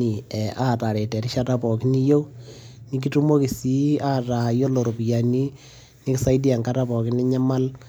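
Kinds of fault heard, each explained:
Nothing stands out here as a technical fault; the speech comes across steady and intact, with no problems worth flagging.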